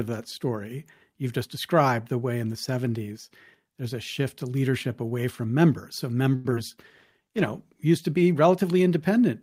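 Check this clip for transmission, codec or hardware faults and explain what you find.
Four network-related faults cluster just after "away from members so", between 6.35 s and 7.87 s.

Short stall from a late packet, 6.35–6.47 s: a packet arrived late and the jitter buffer ran dry, so the receiver held the last sound for about 94 ms, then resumed where it left off. Nothing is lost, but the sound drags. A spectrogram shows frozen, smeared harmonics.

Short concealed packet loss, 6.51–6.54 s and 6.56–6.58 s: each time, 20 ms of audio never arrived, and the decoder patched it by extending the preceding sound before blending back. These are heard as quick smears or wobbles. The waveform shows brief discontinuities in the envelope.

Call bitrate drop, 6.77–7.87 s, ending just before "to be": the bandwidth estimate fell, and the encoder went from 48 to 16 kbps for roughly a second. Coarser coding makes the sound rough and watery. 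The spectrogram looks blurrier and less detailed until the rate recovers.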